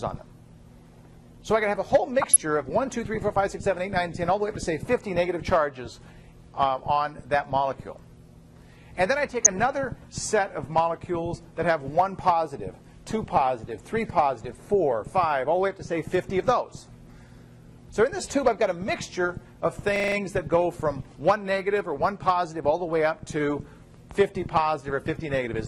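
Throughout the audio there is plainly audible codec damage: a dull top end with gurgling, granular distortion where upper sub-bands drop in and out and the remaining bands sound coarsely quantised. The likely cause is MP2 compression at a low bitrate, consistent with roughly 80 kbps. Three bursts of DAB burbling occur at 2.22–2.41 s, 9.28–9.62 s and 13.37–13.50 s. Uncorrected bit errors in the MP2 stream corrupt sub-band data across several consecutive frames, producing short watery blips and bubbling squelches confined to individual frequency bands. The longest burst is at 9.28 s. At 19.96–20.16 s a system hang loop is audible. A 40 ms piece of audio repeats exactly five times at a 25 Hz loop rate, because the sound hardware kept replaying the same ring buffer while the host stalled. Playback then resumes with essentially no audio missing.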